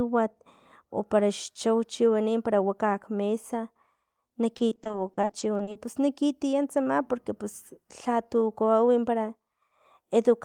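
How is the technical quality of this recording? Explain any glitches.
The recording has one clear problem, a burst of repeated packet loss (robotic sound) from 4.57 to 5.77 s. In that stretch the audio keeps dropping out in quick, short holes, none longer than about 40 ms. Each one is papered over by stretching out the last bit of sound received, and together the patches make up about a third of that 1.2-second window. You hear choppy speech with little pieces missing.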